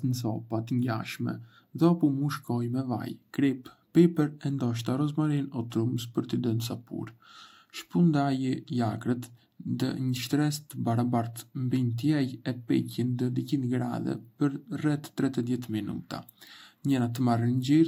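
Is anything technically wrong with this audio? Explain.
No, nothing technically wrong can be heard in this recording.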